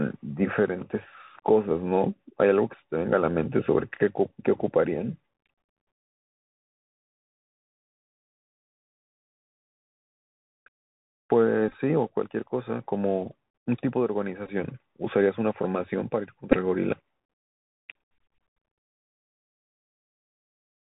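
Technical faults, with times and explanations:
Throughout: Bluetooth CVSD headset codec. Nothing passes above 4 kHz. A one-bit up-down coder leaves granular hiss, and s sounds turn scratchy.
11.69 to 11.73 s, 14.46 to 14.49 s, 16.52 to 16.57 s: Bluetooth headset packet repeated. Lost packets were replaced by earlier ones. The repeats in the first two give short buzzes near 267 Hz. The first event has the longest run, about 15 ms at most.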